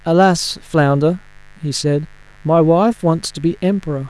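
A mains buzz runs under the speech from start to finish. Sharp electrical spikes from the 50 Hz supply leaked in, twice per cycle. Their harmonics stretch into the kilohertz range. It sounds like a steady, raspy buzz, roughly 35 dB below the speech.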